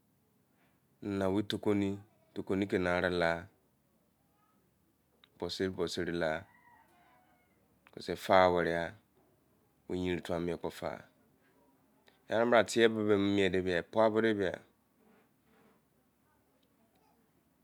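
No technical faults can be heard anywhere in this recording.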